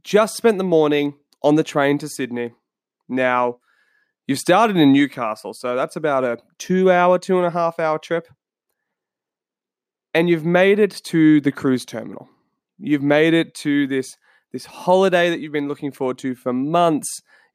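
Speech recording with no audible technical faults anywhere.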